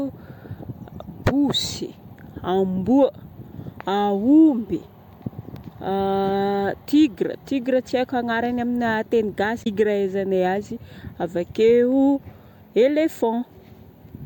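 At about 9.60 s, running to roughly 9.67 s, there's a short burst of damaged data in the compressed stream. A stretch of the encoded data there was corrupt, so the decoder couldn't make sense of those frames, lost sync and hunted for the next valid frame header before picking the speech back up. You hear it as a quick glitch lasting only around 70 ms.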